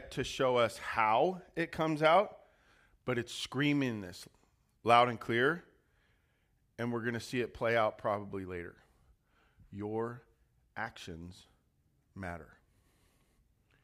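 No technical faults are audible.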